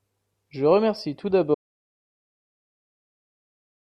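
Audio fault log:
1.55 s to end: audio dropout to silence. Speech stops dead into silence without room tone, likely lost input while silence kept being recorded.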